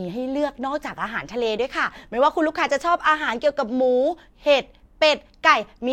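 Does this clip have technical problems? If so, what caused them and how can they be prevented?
No, the speech in this clip shows no technical faults, so there is nothing here to trace back to a cause or to prevent.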